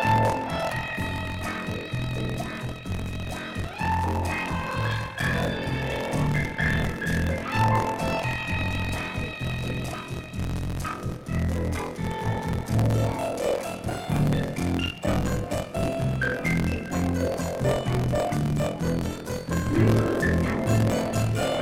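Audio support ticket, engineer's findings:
Buffer tearing throughout: 43.1 Hz robotic buzz, only with signal. Fits 1024-sample buffer. Writer and reader crossed. Roughly a fifth of each period is stale.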